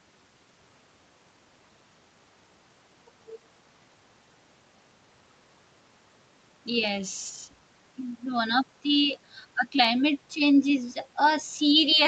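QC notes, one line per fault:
No faults found; the short fade-in ending at 0.59 s is a normal edit, and the top end stops at about 8 kHz, as expected for a call path.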